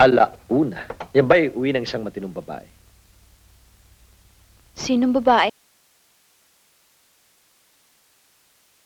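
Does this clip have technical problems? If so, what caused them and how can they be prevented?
Yes: an audio dropout to a faint residue at 5.50 s leaves only hiss, about 40 dB down, to the end, likely from a signal break upstream; the abrupt cut distinguishes it from a fade. Secure cables and connections and monitor levels during recording.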